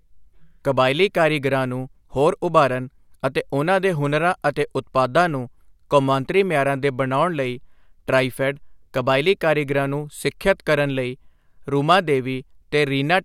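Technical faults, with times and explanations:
No technical faults can be heard in this speech clip.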